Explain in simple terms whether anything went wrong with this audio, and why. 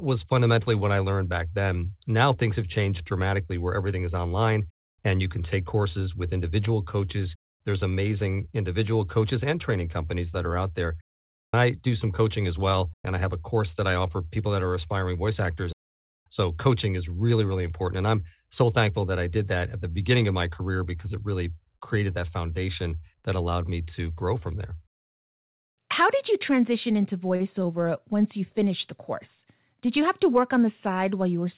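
A short stall from a late packet occurs at 27.36 to 27.42 seconds. One chunk of the call audio arrived late, so the receiver stretched the last sound for about 38 ms while waiting, then continued from the same spot. Nothing is lost, but that sound is held slightly too long.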